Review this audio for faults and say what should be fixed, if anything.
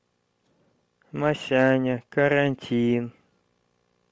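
Throughout the speech, upper frequencies sound breathy, grainy and noise-filled, likely from Bluetooth LC3 compression at a low bitrate, which fits about 32 kbps. To prevent it, record over a wired connection or raise the Bluetooth link's bitrate.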